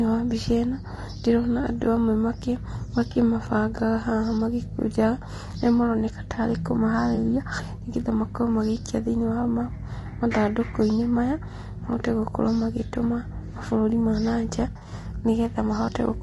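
The speech runs throughout through what is likely low-delay AAC compression, at a rate that fits about 32 kbps. The short coding frames resolve pitch harmonics poorly, so the voice sounds rough and grainy, with noise between the harmonics and a thin, synthetic top band.

AAC frame loss with concealment occurs three times, with the decoder patching each gap from the last good spectrum. At 3.11 to 3.17 s, about 40 ms is missing and sounds smeared and noisy. At 7.15 to 7.18 s, just after "maroneka ta arĩ", a 20 ms gap leaves a brief phasey blur. From 14.71 to 14.93 s, after "mabũrũri ma na nja", about 120 ms of loss is scattered over 200 ms in runs of roughly 40 ms at most, giving a stretch of repeated smeary patches.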